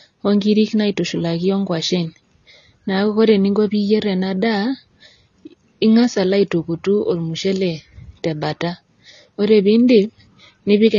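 AAC compression runs throughout the speech, with plainly audible damage from start to finish. Nothing survives above 7 kHz, so sibilants and consonant edges lose their air and the whole sound turns dull. The encoder has too few bits to describe each frame's spectrum, so it drops quiet detail and lowers its cut-off. The coarseness points to a low bitrate, around 24 kbps, with AAC-LC the likely cause, and sustained sounds pick up a warbling, fizzy texture.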